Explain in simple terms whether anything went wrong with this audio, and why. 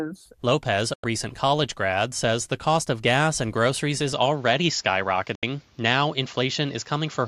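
Two things go wrong here, one of them twice.

The first is a digital broadcast dropout. At about 0.94 s the sound quickly fades out and leaves a hole of roughly a tenth of a second, and it comes back just before "recent college grad says." It happens again at about 5.35 s, a gap of around 0.08 s. Each time the receiver stopped getting good data, likely a handful of corrupted frames, so it muted until clean data resumed. Whatever was sent during those holes is simply gone.

The second is an input switched to a poorer device. From about 4.13 s, right after "gas and groceries is," to the end, the sound turns duller and boxier. Nothing above about 7.3 kHz gets through, and a different background noise comes in with it. There's no silence at the changeover, and the loudness stays about the same. The likely cause is the recording switching mid-stream to a lower-quality microphone or a headset's call mode.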